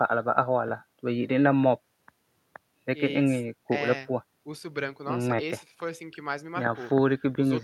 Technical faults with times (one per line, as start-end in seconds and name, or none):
none